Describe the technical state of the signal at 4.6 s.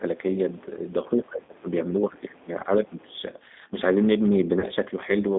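Right at 4.60 s there's a dropout handled by VoIP packet loss concealment: about 20 ms went missing, which fits a single lost packet. The G.729 decoder filled it by extending its last pitch and filter with fading gain, so you get a short buzzy or noisy smear, and the voice stays a bit off until around 4.64 s while the frames rebuild. Under that, the whole thing runs through the G.729 codec at 8 kbit/s, so the line only carries roughly 200 Hz to 3.7 kHz. The speech has that plainly audible rough, slightly synthetic quality from being rebuilt out of a few pulses per frame.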